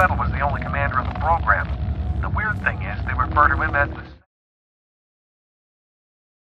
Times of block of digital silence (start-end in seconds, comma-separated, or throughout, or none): none